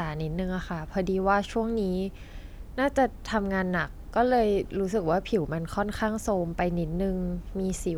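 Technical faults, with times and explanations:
Nothing in the speech stood out as a technical problem on listening.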